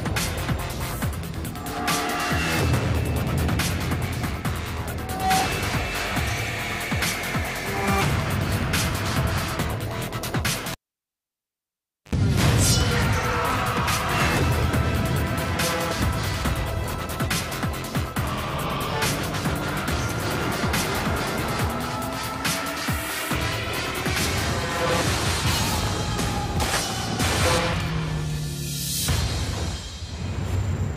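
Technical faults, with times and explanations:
10.72 to 12.15 s, cable pulled and plugged in: a live connection is broken and then remade, so the signal path opens with a pop and drops to near silence for about 1.38 s. As the plug goes back in, only the tip makes contact at first. With the sleeve ungrounded, the line picks up a 50 Hz mains buzz for about 70 ms. A second pop follows when the plug seats fully and the sound returns.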